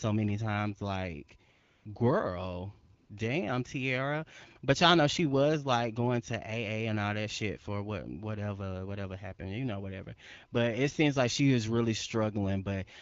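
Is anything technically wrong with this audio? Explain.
Yes, there are two short stretches of AMR comfort noise, from 1.51 to 1.85 s and from 2.97 to 3.09 s. The phone decided nobody was talking and stopped sending speech frames, so the receiver filled those gaps with smooth synthetic noise. You can hear the real background drop out and switch back in. The audio also carries the light coloring of the AMR wideband (HD Voice) codec, which fits a rate around 12.65 kbit/s.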